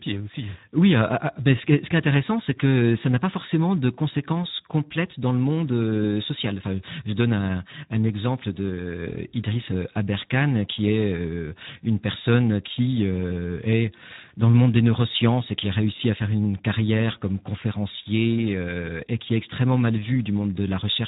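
Throughout, the speech sounds hoarse and grainy, with nothing above 3.8 kHz. This is Speex codec damage, with thin excitation that fits an 11 kbps setting.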